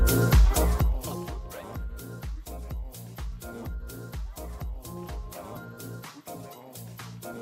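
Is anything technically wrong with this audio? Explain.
Yes. From 0.52 to 1.37 s, a rapid ticking rides on a drop of about 20 dB. This is zipper noise: the gain falls in unsmoothed 1 dB steps, roughly twenty a second.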